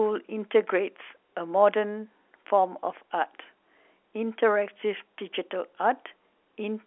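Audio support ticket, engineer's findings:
Nothing stood out on listening to the speech, which comes through the G.711 telephone path with its usual narrow line band and nothing audible above about 3.8 kHz.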